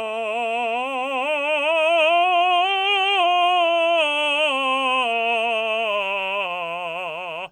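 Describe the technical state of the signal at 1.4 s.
At 1.4 s the music plays through intact, with no dropout, distortion or other technical fault at that point.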